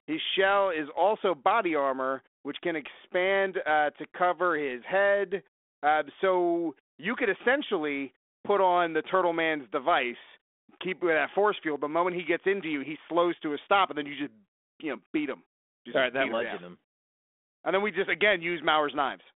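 No technical faults are audible.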